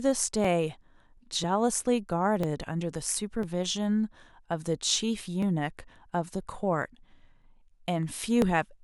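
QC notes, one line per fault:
0.45–8.42 s, periodic USB or driver dropouts: you get a small tick in the speech roughly once a second, spaced almost exactly 1.0 s apart, about ten of them across that stretch. Each one is a tiny chunk of audio, around a millisecond, that's simply skipped rather than filled with silence, so the waveform jumps and clicks at the join. The steady spacing points to some background task stalling the USB bus or audio driver on a fixed timer. The ticks only show up where there's signal underneath.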